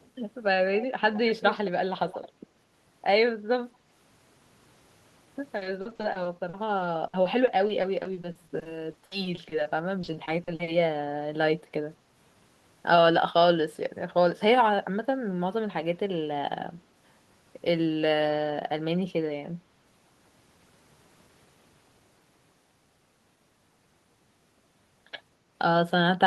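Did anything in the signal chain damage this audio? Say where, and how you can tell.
Yes. Echo leak in the first couple of seconds: a faint-to-clear delayed copy about 215 to 225 ms behind, at 0.0, 0.79, 1.0–1.7 and 2.07–2.29 s, likely a loudspeaker echo canceller letting residue through.

Network stage: repeated packet loss (robotic sound) from 5.57 to 10.69 s. Frequent holes up to 60 ms get patched by stretching prior sound, roughly a fifth of that span, so it goes choppy.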